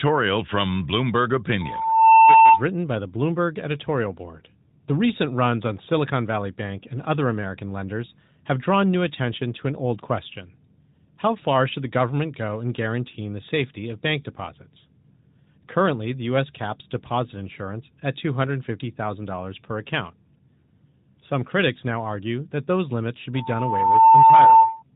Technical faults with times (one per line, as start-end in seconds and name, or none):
23.34-24.83 loudspeaker feedback squeal